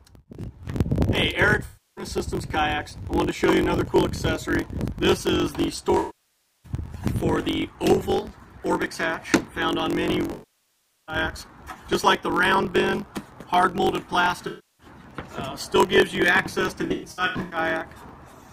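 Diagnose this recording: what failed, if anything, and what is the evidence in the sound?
A buffer stage has a block size mismatch (truncated): the writer produces longer blocks than the reader takes, which fits 1024-sample writes, and each block's tail is discarded. Throughout, this gives a buzz at 45.9 Hz, and the audio runs 1.07 times fast at roughly normal pitch.

In the codec path, AAC frame loss with concealment fills gaps from the last good spectrum. There are smeared, phasey patches at 1.65–2.05 s (0.32 s) and 14.47–14.87 s (0.32 s), and longer losses at 5.98–6.72 s (0.66 s) and 10.31–11.16 s (0.77 s). At 16.81–17.57 s, losses totalling 0.45 s are scattered, with runs up to about a tenth of a second.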